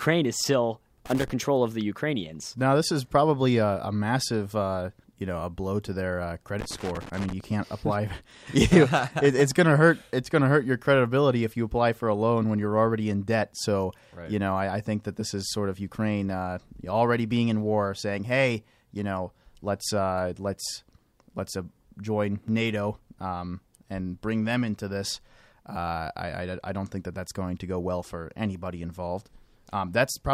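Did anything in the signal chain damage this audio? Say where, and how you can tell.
Yes, in the analogue wiring: a worn or dirty contact in a cable or jack was making and breaking as it moved, producing loose connector crackle. The line is chopped on and off irregularly, which is heard as bursts of scratchy crackle over the speech, first from 1.06 to 1.30 s, between "is still" and "of the", then for a longer stretch from 6.59 to 7.44 s, right after "blow to their uh".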